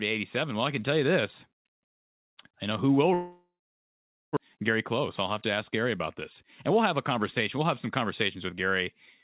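After "I know who will", at 3.14 s, the sound smears into a fading buzz, then goes silent until 4.39 s. This is likely a long network dropout. About a second of audio never returns.

From 5.25 to 8.70 s, the speech runs 5% fast at unchanged pitch. This is jitter buffer speed-up. Short pitch-period slices are cut to shed built-up delay.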